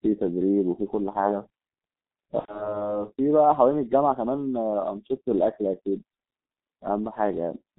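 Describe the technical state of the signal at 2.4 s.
At 2.4 s you're inside a VoIP packet loss concealed by the speech codec, running 2.39 to 2.78 s. About 90 ms went missing, which fits three 30 ms frames. The decoder kept extrapolating its last pitch and filter, so it turns into a buzzy tone or coloured noise that fades, then sounds weak or distorted for a bit after packets return. Underneath, the G.723.1 codec at 6.3 kbit/s squeezes everything into roughly 200 Hz to 3.7 kHz, leaving it heavily muffled and hoarse, with smeared consonants.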